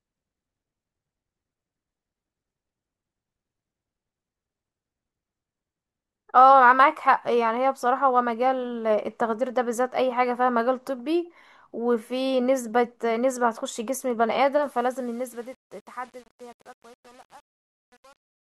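From 14.62 s to the end at 18.57 s, the speech fade-out carries truncation distortion. The fade itself starts around 14.6 s, but the gain stage behind it keeps only 8 bits and adds no dither. As the signal drops toward the smallest step, the waveform collapses into coarse square steps. From 14.89 s onward the tail turns gritty instead of tapering away.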